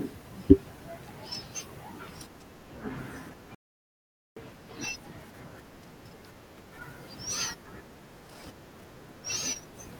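A Bluetooth stall from 3.55 to 4.37 s cuts the speech to silence for 0.82 s before it resumes, likely from radio interference delaying packets until the receiver's buffer emptied.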